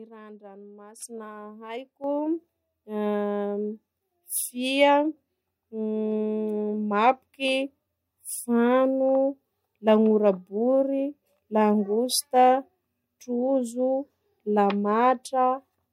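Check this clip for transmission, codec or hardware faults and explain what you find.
There are two faults of one kind: the microphone volume stepped up at 1.02 s and again at 2.04 s. The call software judged the microphone too quiet. It raised the device's input volume in a single step each time. The first step adds about 10 dB, the second about 7 dB. Speech and background noise jump up together at each point. The level rises abruptly rather than fading in smoothly.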